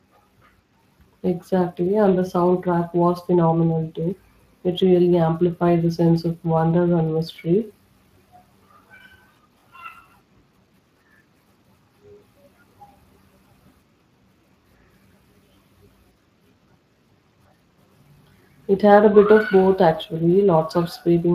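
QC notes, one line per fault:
Throughout: Speex codec. The speech has passed through Speex with too few bits for the excitation signal, consistent with a rate around 22 kbps. The result is a plainly audible noisy, hoarse grain on the speech. Nothing is present above 15.4 kHz.
4.58, 9.60, 14.62 and 19.64 s: overlapping chunks. The audio was handled in 5-second chunks, and each chunk began before the previous one finished. This makes about 21 ms of sound play twice at every join, which is heard as a brief stutter or click every 5 seconds.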